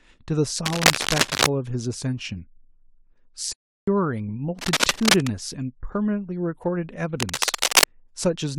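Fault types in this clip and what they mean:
cable scratch noise: Dense, uneven rustling bursts ride over the speech at 0.65–1.47 s, 4.59–5.31 s and 7.20–7.87 s, roughly 5 dB louder than the speech, likely from a worn cable or connector being moved. Unlike steady hiss or single clicks, it flares irregularly, then vanishes.
playback stall: At 3.53 s the speech halts in mid-flow and stays silent for 0.35 s, then carries on at 3.88 s, likely because the player was starved of data or blocked.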